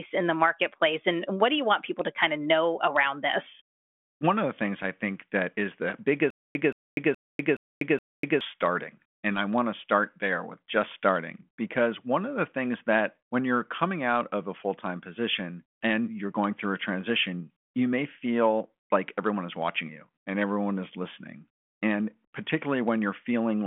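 Stutter with silent gaps, 6.30 to 8.41 s, right after "think that is the": in this telephone-band speech clip, a 174 ms fragment repeats five times, each followed by about 246 ms of dead silence at a steady 421 ms pace. The likely cause is a stalled stream replaying its last buffer on each retry, so the audio from that stretch is lost.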